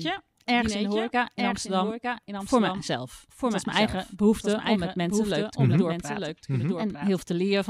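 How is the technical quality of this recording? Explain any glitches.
The recording has one clear fault, a doubled audio track, present from start to finish. Throughout the speech, a second copy of everything trails the original by roughly a second, sitting around 5 dB quieter. It is full-band and dry, with none of the decay or room colour a real echo would carry, so it sounds like a duplicate playing over the top. The likely cause is the same signal being captured twice, once through a slower path, and mixed back in out of step.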